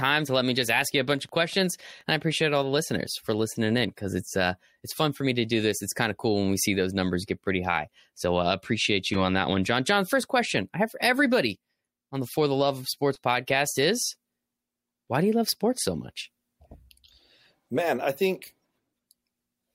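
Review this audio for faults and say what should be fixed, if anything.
Wi-Fi interference ticks faintly from 0.53 to 2.65 s. A nearby radio's beacon, every 102.4 ms, is rectified by the audio circuit. Keep phones and routers away from the microphone, preamp and cables.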